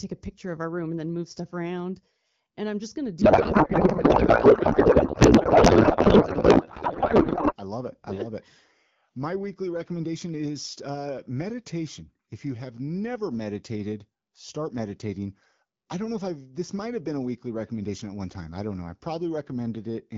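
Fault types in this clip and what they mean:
Codec payload misread: from 3.21 to 7.56 s, after "I'm just going to" and until "I love it I", the speech turns into garbled noise and warble that barely tracks it, because octet-aligned AMR frames were unpacked as bandwidth-efficient, so the decoder read every field from the wrong bit positions.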